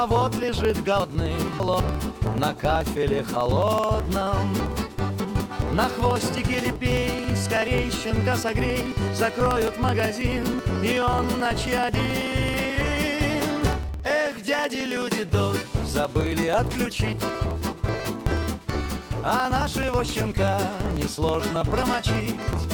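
From 0.11 s to 22.64 s, the USB bus or audio driver is blocked every 54 ms, and about 10 ms of audio is skipped each time, several hundred times in all. These periodic USB or driver dropouts make a steady ticking that is heard only while sound is present.

At 1.0 s and again at 4.6 s, a 200 ms chunk of audio arrives late and plays three chunks after where it belongs. These chunks out of order jumble the spans from 1.0 to 1.8 s and from 4.6 to 5.4 s, with three hard joins in each.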